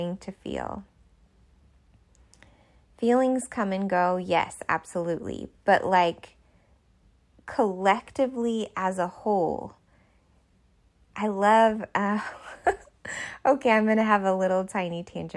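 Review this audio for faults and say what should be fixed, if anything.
Nothing here needs fixing: the speech signal stays stable and intact throughout, with no audible technical faults at any point.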